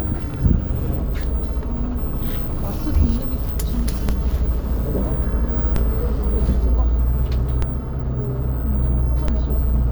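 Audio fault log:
4.09, 5.76, 7.62 and 9.28 s: DC step, four times. At each moment the waveform's zero line jumps abruptly, by about -8 dBFS at the first two and about -10 dBFS at the last two. That sudden shift is heard as a low thump or click. The offset then decays away quickly, as a 20 Hz high-pass would let it. The sound itself carries on unchanged through each step.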